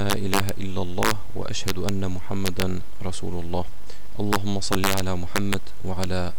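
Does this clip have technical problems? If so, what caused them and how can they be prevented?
Yes. Integer overflow cracks at 0.10–0.49, 1.03–1.11, 1.68–1.89, 2.46–2.62, 4.33–4.36, 4.73–5.00, 5.36–5.54 and 6.04 s. Peaks up to about 3 dB over full scale wrap to the opposite sign instead of flattening, cracking far harsher than clipping. Saturating arithmetic or added headroom prevents it.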